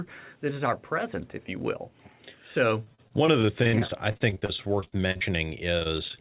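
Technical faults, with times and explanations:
2.84 to 5.23 s, repeated packet loss (robotic sound): 26 little dropouts in a row, the longest 56 ms, with about a quarter of the stretch patched over by stretching the last bit of sound, so it goes choppy, with pieces missing.
4.68 to 5.45 s, jitter buffer slow-down: the receiver padded out 64 ms by repeating tiny pitch-period chunks to rebuild its reserve, so the speech drags at 93% speed, same pitch but drawn out, overlapping the tail of that choppy patch.
5.79 to 6.19 s, repeated packet loss again: six shorter gaps, the longest 21 ms, about a quarter concealed, giving a brief choppy stretch. All of this rides on the narrowband G.711 call sound, with nothing above 4 kHz.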